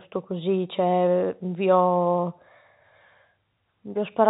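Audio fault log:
No faults can be heard in this speech clip. It has the narrow sound of G.711 telephone coding, with nothing above 4 kHz and only a faint hiss that rises and falls with the level.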